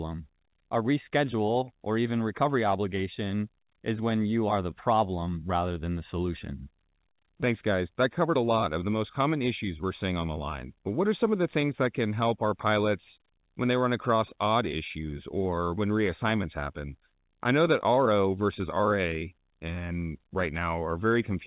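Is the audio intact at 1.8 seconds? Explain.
Yes, the audio is intact at 1.8 seconds, with nothing disrupting the speech at that moment beyond the narrowband, telephone-like sound of the call path, which carries nothing above 4 kHz.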